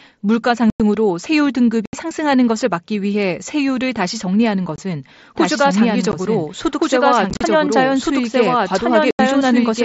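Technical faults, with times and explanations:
0.70–0.80 s, 1.86–1.93 s, 4.76–4.78 s, 6.12 s, 7.30–7.41 s and 9.11–9.19 s: unconcealed Bluetooth headset packet loss. The speech drops into short holes with hard edges. Nothing fills the missing headset packets. Around 7.3 s the gaps are scattered, giving a chopped, crackly stretch.
5.36 s to the end: doubled audio track. A second full-band copy of the speech runs about a second and a half behind, at roughly the same level. It has no decay or room colour, and it enters abruptly. A slower second capture path is the likely cause.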